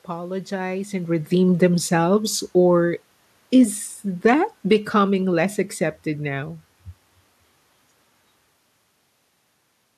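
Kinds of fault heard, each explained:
Automatic gain falling: the gain control judged the input too hot or its background noise too strong and eased itself down by about 6 dB between 1.34 and 5.59 s, so the speech and the room noise behind it sink together, settling just before "accepted now".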